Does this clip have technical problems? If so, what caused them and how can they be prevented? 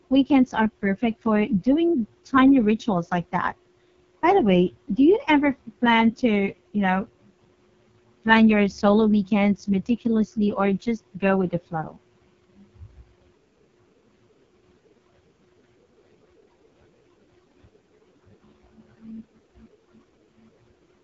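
Yes: throughout, heavy AMR wideband (HD Voice) codec damage makes the speech rough and raspy under a 7.2 kHz ceiling, which fits its lowest 6.6 kbit/s mode. Unlike narrowband telephony, it keeps content up to 7.2 kHz. Prevent it by sending at 12.65 kbit/s or higher.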